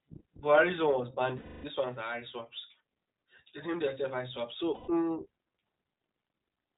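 iLBC codec damage runs through the whole clip: narrowband coding removes everything above 4 kHz and leaves the speech plainly rough and synthetic, consistent with iLBC's 15.2 kbps, 20 ms frame mode.

Lost iLBC frames occur at 1.38–1.65 s, just after "one was", and at 4.74–4.90 s, after "named themselves eye swaps". About 260 ms and 140 ms go missing. The decoder repeats the last pitch cycle mixed with noise, so each gap sounds like a held, buzzy vowel before the voice recovers almost at once.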